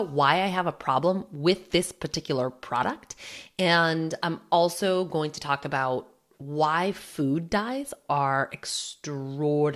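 No technical faults can be heard anywhere in this speech recording.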